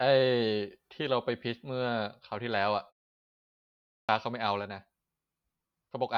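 At 3.94 s, after a pause of about 1.1 s, the speech resumes abruptly, its first 146 ms gone, so the word begins mid-sound. This is a clipped start after a pause: the output device slept during the silence and was still waking until 4.09 s.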